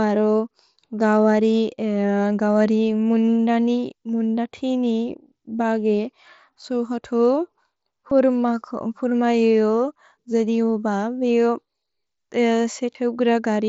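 Concealed Bluetooth headset packet loss hits three times, at 3.25 to 3.27 s, at 8.10 s, and at 12.93 to 12.95 s. Packets from the headset went missing. The receiver refilled each gap of about 15 to 22 ms by repeating recent waveform. Each sounds like a brief buzzy smear with a slight warble. The gaps are short, and the mSBC link adds a light graininess.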